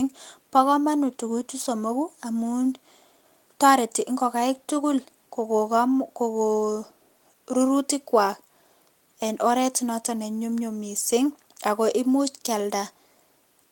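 The recording runs without any audible technical fault, with the signal holding steady and continuous for its whole duration.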